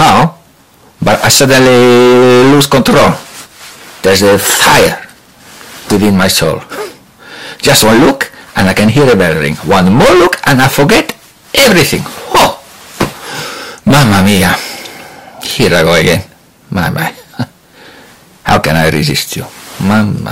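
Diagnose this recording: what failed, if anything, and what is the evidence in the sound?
Hard clipping runs through the whole recording, and it is severe. The signal reaches the stage about 26 dB hotter than it can pass, most likely at the converter input or a fixed-point format conversion, so every loud moment is squared off at that stage's limit. Roughly one sample in seven sits on that ceiling. The flattened tops spray harmonics high into the spectrum, which is why loud passages carry a constant harsh fuzz rather than occasional crackle.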